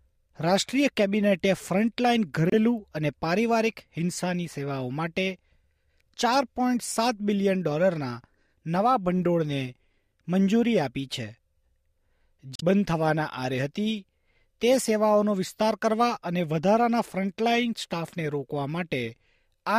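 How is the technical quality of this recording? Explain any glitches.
Two brief glitches interrupt the recording. Both come from damaged data in a compressed stream. At 2.50 to 2.53 s and 12.55 to 12.63 s, corrupted frames make the decoder lose sync and search for the next frame header.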